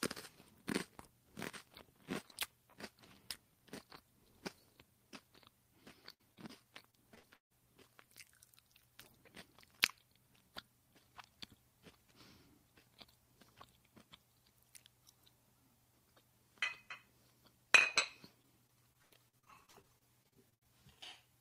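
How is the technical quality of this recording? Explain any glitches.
The recording suffers from network packet loss in three forms, clustered around 6 to 7.5 seconds and again near the end.

At 6.13 to 6.21 s there is a burst of packet loss. Roughly 60 ms of the stream failed to reach the receiver in time, so the decoder extended the last received sound and faded it down across the hole. What you hear is a brief held, dimming smear, after which the audio picks up further along with that 60 ms simply gone.

At 6.35 to 6.39 s, short concealed packet loss follows. About 20 ms went missing, and the receiver patched it by continuing the preceding sound briefly before crossfading back into real audio. Because the patch is so short, it registers only as a tiny smear or wobble.

Repeated packet loss (robotic sound) appears twice. From 6.91 to 7.52 s, four gaps totalling about 240 ms, the longest 153 ms, leave about 39% of that stretch synthesized. 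From 18.42 to 20.66 s, nineteen shorter gaps, none over 81 ms, replace about 23% of the span. Each dropout is filled by extrapolating the last sound, and the next arrives before the audio recovers. The result is choppy audio with fragments missing.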